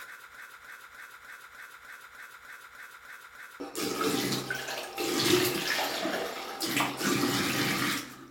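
A broken-record loop runs from 0.35 to 3.6 s in this sound clip: a 0.30 s fragment repeats back to back 11 times, likely from a stalled player or stream resending its last buffer, so the intended audio is lost.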